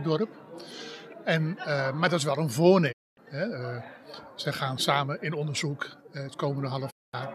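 At 2.91 s the sound dips to silence over about 20 ms and stays gone until 3.19 s, a digital broadcast dropout. The receiver lost good frames and muted until clean ones arrived; the 240 ms hole fits about ten 24 ms frames. It happens again from 6.89 to 7.15 s, with the same quick fade and a 216 ms gap, around nine frames. Whatever was sent in those gaps is simply lost.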